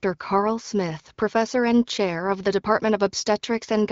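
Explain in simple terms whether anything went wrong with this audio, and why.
Nothing went wrong here; it's just speech coming through an HD Voice phone connection, which sounds a little narrower than a studio recording, and that's exactly what such a call normally sounds like.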